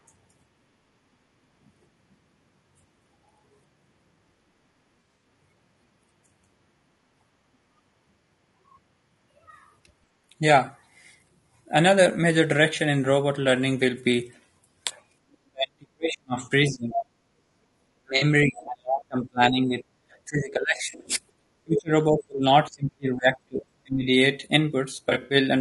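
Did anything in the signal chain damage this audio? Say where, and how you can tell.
Yes. At the codec stage, the whole clip is rough and grainy, with noise filling the gaps between pitch harmonics and a thin, somewhat synthetic top band. This is low-delay AAC compression, likely AAC-ELD at a low rate, around 32 kbps. Its short frames resolve harmonics poorly. On a spectrogram the harmonic stripes look smeared and speckled, with a haze between them and blocky, patchy energy in the upper band.

At the network stage, AAC frame loss with concealment appears as brief smeared, phasey patches at 5.00–5.24 s, 18.17–18.23 s, 20.77–21.06 s and 25.09–25.35 s. The decoder fills in missing frames from the last good spectrum. The first loss totals 140 ms in runs of about 40 ms at most, the last 120 ms with a run near 70 ms. A spectrogram shows short vertical slices of noisy, structureless energy that break the harmonic lines.

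In call processing, the talker dips sharply at 15.46–16.94 s, 18.01–19.82 s and 20.26–24.05 s. The drops reach about 40, 35 and 30 dB, and the highs vanish or the sound cuts out in pieces. This is speech suppressed in double talk, likely because the echo canceller clamped both sides during overlap. On a waveform the envelope collapses in ragged steps.

Also in call processing, the other side's voice leaks through in short scraps at 16.92–17.04 s and 21.76–21.81 s. It sits only about 5 dB below the talker, likely residual loudspeaker echo the canceller left in the microphone signal. A spectrogram shows a second, unrelated harmonic pattern appearing briefly.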